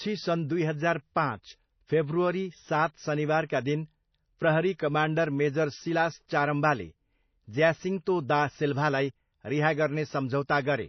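Throughout, the speech has nothing above 6 kHz and a watery, swirling texture, likely MP3 compression at a low bitrate, consistent with roughly 24 kbps.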